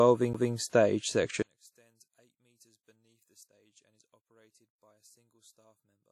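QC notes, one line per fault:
Throughout, WMA compression: plainly audible washy ringing and breathing hiss, likely from low-bitrate transform coding around 48 kbps; the spectrogram shows smeared blocks and nothing above 18.6 kHz.
0.33 s, CD skip: a brief mute of about 10 ms, then playback resumes from another point on the disc, seen as a tiny waveform gap with a discontinuity.
1.42 s to end, one channel inverted: level drops by about 36 dB as the shared content cancels in the mono sum, likely from reversed polarity; the waveform collapses to a low residue.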